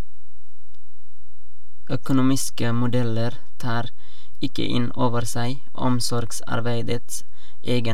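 From start to finish, the speech carries a DC offset of about -16 dBFS: the entire waveform sits displaced from the zero line by a fixed amount rather than swinging symmetrically around it. The shift itself makes no audible tone, but it eats into headroom on one side, so peaks in that direction reach full scale sooner. On analysis it appears as a constant component at 0 Hz, parked at the very bottom of the spectrum.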